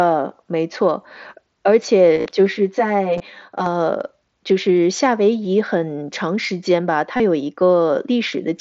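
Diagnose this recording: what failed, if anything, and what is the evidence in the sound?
The Bluetooth link between headset and phone dropped packets, and the receiver papered over the gaps with concealed Bluetooth headset packet loss, repeating the best-matching slice of recent audio. The worst patch is 2.15 to 2.26 s: about 75 ms lost, spread over roughly 105 ms, with the longest run 45 ms. That gives a short buzzy, held tone and a slight warble as real audio comes back. There are smaller hits at 3.18 to 3.20 s (about 22 ms) and 7.17 to 7.20 s (30 ms). The mSBC wideband codec carrying it sounds as it should.

Separately, from 2.47 to 3.66 s there's channel delay with comb filtering. One channel arrives about 10 ms late, which points to a buffer or driver stage, and the two get summed to mono. Everything common to both cancels at evenly spaced frequencies, the first notch landing around 50 Hz, so that stretch goes hollow and phasey. 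It overlaps the 3.18 s dropout, so both effects are stacked briefly there.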